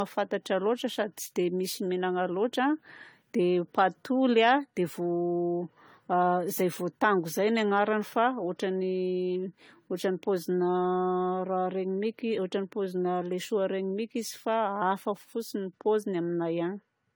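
Speech that, from start to finish, sounds swirly, smeared and hollow, with blurred consonant attacks, beyond what a single 64 kbit/s AAC-LC encode would produce. That points to generation loss, likely from about seven repeated encode-decode passes stacking artefacts on shifted frame grids.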